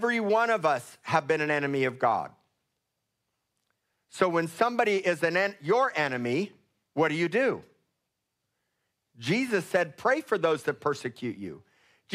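No technical faults can be heard anywhere in this speech recording. Nothing in the audio points to a dropout, glitch or distortion at any point.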